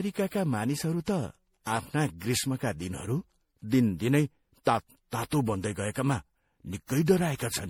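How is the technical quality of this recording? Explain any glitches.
The recording has audible, consistent degradation from generation loss. Generation loss runs throughout: the speech was likely decoded and re-encoded as MP3 around seven times. Each pass requantises on a shifted frame grid, so noise and spectral holes accumulate. The result sounds swirly, smeared and hollow, worse than a single encode at roughly 64 kbit/s would explain, and attacks are blurred.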